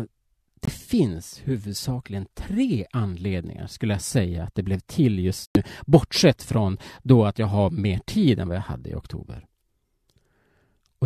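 Speech with two corrupt frame muted dropouts, where damaged compressed frames were rejected by the decoder and replaced with silence while timing stayed intact. At 0.65 s a 32 ms hole opens abruptly just before "finns huvudsakligen tre anledningar", which fits a single lost frame. At 5.46 s, right after "att det blev till", a longer 112 ms gap cuts in sharply, pointing to a run of about four consecutive frames.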